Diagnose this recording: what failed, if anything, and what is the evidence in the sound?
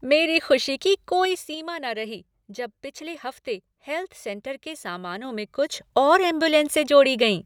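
What failed is the gain stage at buffer level, and you can hear zipper noise on two level moves. From 1.21 to 1.58 s the speech drops by roughly 10 dB in steps of about 3 dB, around ten a second, each one leaving a little tick. From 5.13 to 6.01 s it comes back up by about 10 dB, stepping slower, around four a second. The gain is being jumped per block with no smoothing, so every jump clicks, unlike the fader-style moves that glide cleanly.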